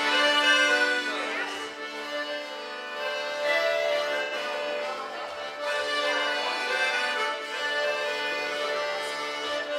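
Around 4.23 to 4.34 s, an AAC frame loss with concealment leaves a smeared, noisy patch about 85 ms long, consistent with two lost frames. The spectrogram shows a blurred, uniform band where the decoder repeated earlier spectrum.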